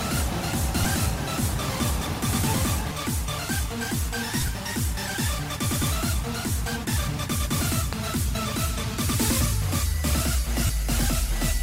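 At 0.84 s a single 7.5 ms block of lost LE Audio frames goes by. The LC3 decoder fills it with the previous spectrum under random signs. It is a tiny smeared blip. From 4.41 to 4.48 s, 30 ms of frames drop out in scattered gaps, the longest around 15 ms. The sound turns briefly noisy and grainy. From 7.93 to 8.18 s comes a loud pop, heard as two sharp thumps about 15 dB above the sound, which continues beneath. A voltage spike is the likely cause, from a switch, a plug, static or a driver glitch. At 10.66 to 10.70 s a 30 ms run drops out, and the sound turns into a noisy smear. The light lossy compression shows at most as a faint watery texture on noise and attacks.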